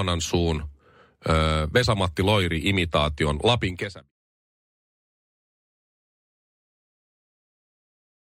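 Nothing stood out on listening to this speech; the smooth fade-out that begins around three and a half seconds and finishes at 4.12 s is gradual, with no click or hard edge.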